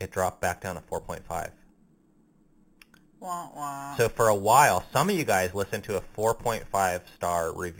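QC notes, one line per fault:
Throughout: imaging from sample-and-hold upsampling. The speech was raised from 8 kHz to 44.1 kHz by just repeating samples, no smoothing filter, so mirrored copies of the spectrum land above 4 kHz, first one spanning 4 to 8 kHz at about 14 dB down. You hear it as a metallic fizz riding the speech.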